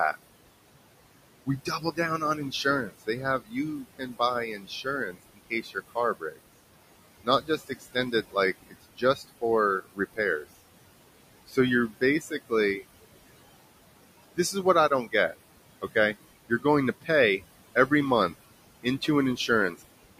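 A speech recording where the background noise, which sits about 14 dB under the talker, pumps down between phrases and swells back under each one. These are noise suppressor artifacts. The suppressor judges each band, frame by frame, as steady noise or not, and cuts what it calls noise by about 20 dB, so the noise floor keeps jumping with the speech. In places the talker itself goes faint, with consonants and word endings sounding swallowed, from 1.45 to 6.39 s, 7.24 to 10.46 s, 11.48 to 12.83 s, 14.36 to 15.96 s and 16.49 s to the end. This is speech cut by the noise suppressor, which mistook quiet parts of the voice for background and pulled them down with it. The drops reach about 21 dB in the first two spans, about 15 dB in the third and about 18 dB in the last two. The affected moments add up to roughly a second and a half in the first span and well under a second in each of the others.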